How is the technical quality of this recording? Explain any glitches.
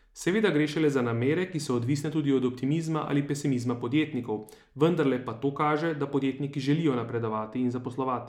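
The recording has one fault, near the end of this speech clip. From 7.09 s to 8.28 s, right after "kaže da podjetniki želijo", de-emphasis has been applied wrongly: a treble-cutting filter meant to reverse pre-emphasis acted on audio that never had that boost, or undid it a second time. The result is a smooth downward tilt reaching about 11 dB at 10 kHz relative to 1 kHz, so the closing stretch sounds dull and muffled, its crisp consonant detail dulled.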